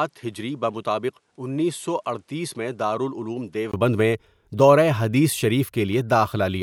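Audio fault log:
0.00–3.74 s, input switched to a poorer device: the recording likely began on a lesser microphone before switching to the main one. Until then the speech is a few dB quieter, has nothing above 11.4 kHz, and carries a faint extra noise floor. It ends with a 20 ms gap at 3.74 s.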